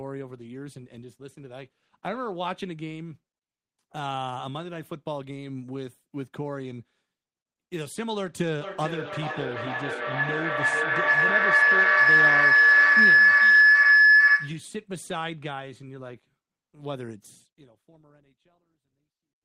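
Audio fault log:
8.61–14.77 s, feedback howl. Two devices form a loop that gains level each trip. A tone near 1.5 kHz builds, pulsing roughly every 400 ms, peaking about 15 dB above speech.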